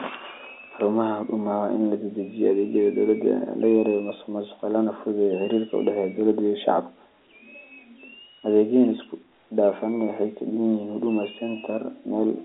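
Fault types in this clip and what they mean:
No faults can be heard.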